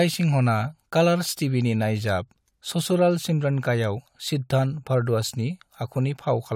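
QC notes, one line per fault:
No faults found; nothing to log.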